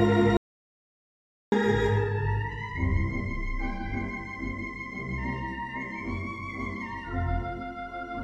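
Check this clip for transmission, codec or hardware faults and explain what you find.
One fault: an audio dropout to silence from 0.37 to 1.52 s, losing 1.15 s. The input likely disconnected while recording continued, writing silence. Unlike a noise gate or fade, the sound cuts abruptly and even the room tone vanishes.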